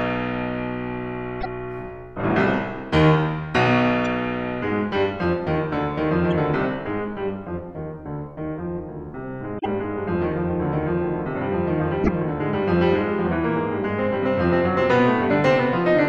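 Five short glitches break into the music: at 1.37 to 1.46 s, 4.01 to 4.04 s, 6.31 s, 9.58 to 9.66 s and 12.01 to 12.09 s. Each is damaged data in a compressed stream. The decoder misreads corrupted frames and loses sync. Each sounds like a brief chirp, squawk, click or short hole.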